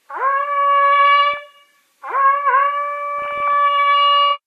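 DAB burbling appears at 1.32 to 1.37 s and again, longer, at 3.19 to 3.53 s. Weak reception let bit errors slip past the error correction into the MP2 data, at a rate of well under one percent. Corrupted samples put short blips of noise into single sub-bands, and corrupted scale factors make sub-bands jump in level for up to a frame. The first burst is short enough to span only a few frames. The second stretches across many.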